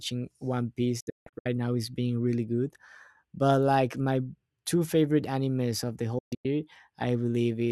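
At 1.00 s the speech suffers a digital broadcast dropout: failed frames mute the receiver in quick 8 ms fades, leaving about 320 ms of holes across 1.00 to 1.46 s, longest 160 ms. A second dropout, 6.18 to 6.46 s, loses about 224 ms.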